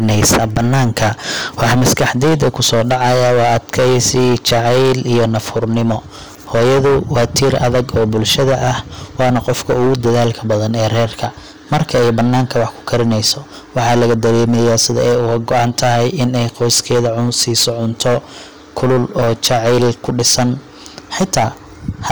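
Hard clipping runs through the whole speech clip. The level is driven about 21 dB past what the stage can pass. Roughly one sample in seven is cut flat. The flat peaks add high harmonics, so every loud syllable carries a harsh, buzzing fuzz.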